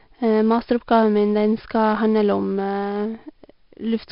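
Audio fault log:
Throughout: 4-bit ADPCM compression. A gritty hiss rides on every loud stretch of the speech and falls away in pauses, because each sample is coded as a coarse 4-bit step from a prediction, so the error tracks the level. Attacks come out harsh where the step size lags. Heavy damage and nothing above 5.3 kHz point to a low sample rate near 11 kHz. Steady background hiss would persist in pauses, and perceptual codecs warble instead.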